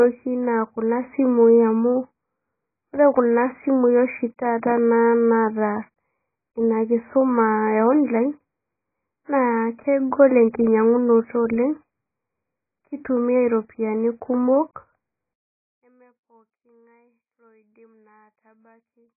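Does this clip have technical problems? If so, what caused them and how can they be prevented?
Yes. Throughout the clip the speech is dull and smeared, with nothing above 2.5 kHz and a warbling, fizzy texture on sibilants. The likely cause is heavy AAC compression, which fits a very low bitrate of around 12 kbps. Encode at a higher bitrate, or use a codec suited to low-rate speech.

From 15.34 s to the end at 19.17 s, the level drops by about 34 dB. The sound becomes faint. This is likely one channel inverted in polarity, so the centred speech cancels when the channels are summed to mono. Check polarity on every channel before mixing down.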